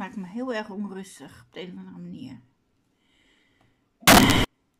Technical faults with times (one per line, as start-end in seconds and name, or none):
4.07-4.44 samples built from the wrong bytes